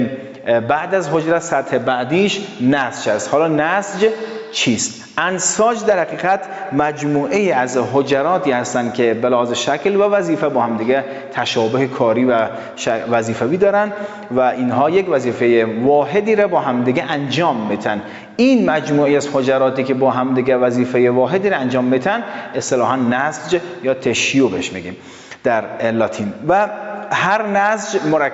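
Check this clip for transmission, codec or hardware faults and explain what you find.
There's one fault here: gain pumping, running through the whole clip. The level keeps getting pulled down by around 10 dB under each loud sound, so everything feels squashed. That's likely an input gain set far too hot with a fast limiter clamping down every time. The top end stops around 8 kHz, which is just the call path's bandwidth.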